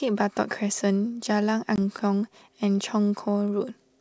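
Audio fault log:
1.76 s, packet loss on an ADPCM call: a hard-edged 20 ms gap of silence, about one packet's worth, cuts into the speech. The decoder's predictor and step size lose step with the sender's, so the speech resumes mismatched until they realign.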